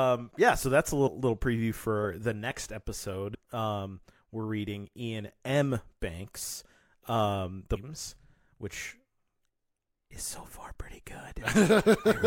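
A speech clip with compressed frames skipped at 3.33 to 3.35 s. The sound jumps ahead by around a tenth of a second, roughly four frames. The step fits a 26.1 ms frame.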